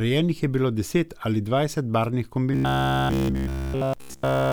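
Robotic sound from repeated short buffers runs from 2.53 s to 4.52 s, right after "deset ali dvajset barvnih". Through that stretch the speech collapses into a rigid, metallic buzz pitched at about 66.7 Hz that only loosely tracks the words. The likely cause is fresh audio arriving too slowly, with playback filling the gaps by looping a segment of about 15 ms. That period sets the fixed pitch, and essentially all of that section is repeated rather than real audio.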